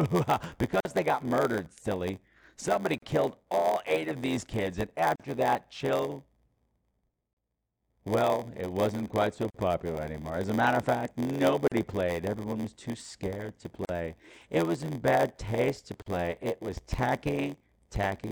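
From the start, a block size mismatch (padded) runs through the speech. One stage writes shorter blocks than the next reads, which fits a 512-sample read, and zeros fill each block. A buzz sits at 86.1 Hz. Speech runs at 0.938 times speed with pitch about normal.

Gaps at a join of encoded pieces appear at 0.80, 2.98, 5.16, 7.33, 9.50, 11.68, 13.85 and 16.02 s. The first lasts 43.4 ms, just before "they got murdered silly". The rest last 37.6 ms. At 9.50 s one falls between "it wasn't quite so" and "popular anymore". At 11.68 s one follows "a matter of fact". The pieces were encoded separately, about 2 s each, and joined untrimmed. Encoder delay and final-frame padding leave silence at each join. The gaps have smeared edges. The speech then resumes where it stopped.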